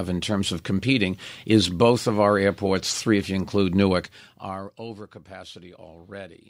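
From 3.88 to 4.76 s the speech carries zipper noise. The level drops by roughly 20 dB over that stretch, but the gain moves in discrete steps, about fifty per second, with no smoothing between them. Each jump leaves a small discontinuity in the waveform that clicks, and in quick succession these clicks form a buzzy ticking that rides on the speech while the level falls.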